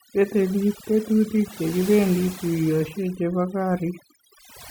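From start to finish the gaps between phrases fall to near silence dotted with twinkling specks. This is overdone noise removal: a noise reduction stage set far too strong has pulled individual frequency bands down or shut them off whenever their level sat close to its noise estimate. The softer components of the voice were caught by that threshold and removed along with the background noise.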